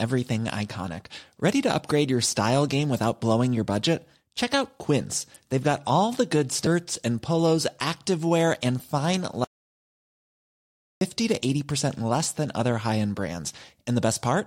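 At 6.67 s, damaged data in the compressed stream derails the decoder. It misreads the corrupted frames, loses synchronisation and searches for the next valid frame header. In the speech this comes through as a brief chirp, squawk, click or short hole.

From 9.44 s to 11.01 s there is an audio dropout to silence, likely caused by the input signal being lost while the recorder kept writing silence. The speech cuts out abruptly, leaving 1.57 s of complete silence with no room tone, then resumes mid-flow. Whatever was said in that gap is gone.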